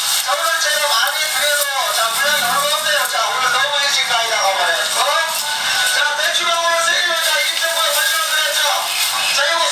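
Gain pumping throughout: input gain is likely far too high, so a fast limiter clamps each loud sound, pumping the gain about 10 dB.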